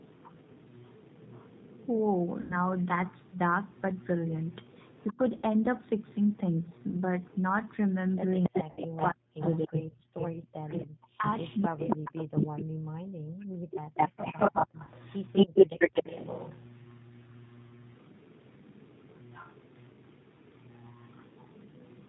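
Throughout, the speech runs through the G.729 codec at 8 kbit/s, which rebuilds each frame from a filter, a pitch predictor and a few pulses. Nothing above 4 kHz survives, so the sound is narrowband, slightly rough and audibly synthetic.

From the start to 12.64 s, the far end's echo canceller likely failed to remove all of the loudspeaker sound its microphone picked up. This echo leak returns a delayed copy of the speech about 279 ms behind and about 10 dB down.

At 2.41 to 2.61 s, three packets (90 ms of audio) were lost. The decoder filled the gap by extrapolating from its last pitch and filter with falling gain, so the speech is stretched into a fading sound and stays weak as it recovers.

At 5.13 to 5.19 s, both sides were likely talking at once. The canceller turned the near talker down with the echo, and the speech dips by roughly 25 dB for a brief moment.

Two more packets went missing at 5.37 to 5.46 s. 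Another 60 ms loss at 8.71 to 8.81 s produces the same stretched, fading concealment.

Double-talk suppression returns far more heavily at 8.49 to 9.83 s. The speech is cut by roughly 40 dB, with the 8.71 s loss falling inside this stretch.

At 10.11 to 10.17 s, the echo canceller clamped the microphone while the loudspeaker played. This background gating makes the room sound drop about 35 dB for a moment before it returns.

Suppression of this kind comes back at 10.61 to 13.89 s. Around two seconds of speech is pushed down by roughly 40 dB.

The echo leak resumes at 13.94 s and runs to the end, now about 221 ms behind the speech and about 10 dB down.

A single lost packet at 14.84 to 14.90 s leaves a short 30 ms concealed blur.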